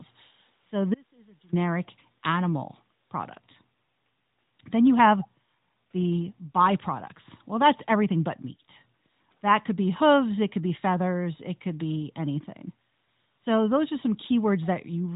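From 0.94 to 1.53 s, an audio dropout to a faint residue cuts the speech for about 0.58 s, likely a transmission break, leaving only a trace about 30 dB down. The waveform shows an abrupt near-flat gap. At 5.22 to 5.28 s, a brief echo leak, likely from imperfect echo cancellation, repeats speech 314 ms later, about 25 dB quieter. On a spectrogram it appears as a faint, delayed copy under the 3.8 kHz narrowband ceiling.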